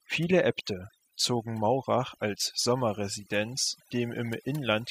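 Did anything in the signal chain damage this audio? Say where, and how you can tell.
Yes. Overdone noise removal throughout, at the call-processing stage: an over-aggressive suppressor mutes bands near its noise estimate, leaving twinkling specks in near-silent gaps.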